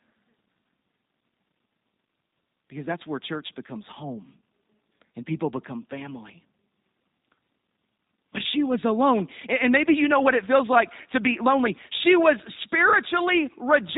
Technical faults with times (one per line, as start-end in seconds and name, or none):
0.00-13.98 G.729 codec